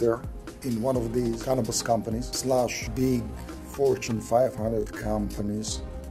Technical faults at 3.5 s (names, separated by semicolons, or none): time-stretched section